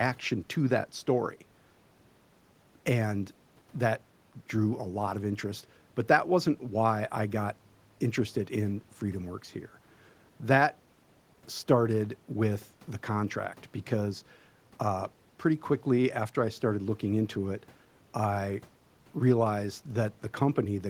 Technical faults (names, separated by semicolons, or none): none